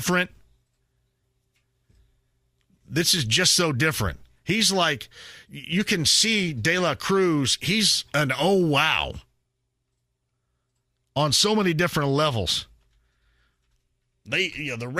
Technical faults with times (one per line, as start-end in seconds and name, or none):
none